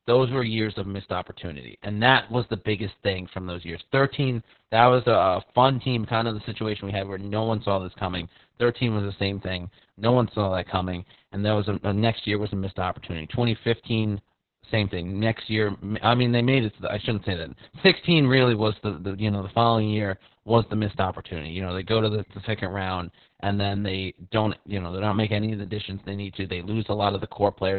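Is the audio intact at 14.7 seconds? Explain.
No. At 14.7 seconds the speech is muffled, hoarse and slightly robotic, with nothing above 4.4 kHz, as it is throughout the clip. The cause is heavy Opus voice compression in its narrowband SILK mode, coarsely coding the excitation, at what sounds like about 6 kbps.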